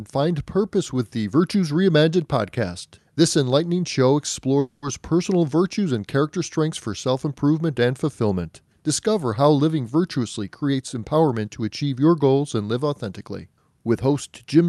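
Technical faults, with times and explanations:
4.59–4.85 s, call audio freeze: for about 0.26 s the sound stops moving forward and the last moment is stretched into a buzzy tail that fades, likely because packets were held up and the jitter buffer ran empty. About 230 ms is filled in, nothing is lost, and the audio resumes where it left off, now 230 ms later. On a spectrogram, the harmonics stop changing and continue as flat, fading bands. The waveform shows a repeating, decaying pattern.
10.23–11.87 s, jitter buffer speed-up: the sound runs about 13% faster with its pitch unchanged, so this stretch sounds hurried. The buffer had built up more audio than it targets, so the receiver cut short pitch-period pieces one after another, removing about a fifth of a second. On a spectrogram, syllables and transitions look compressed in time while the harmonic spacing stays the same. The waveform shows the same cycles packed closer together, with small seams where pieces were removed.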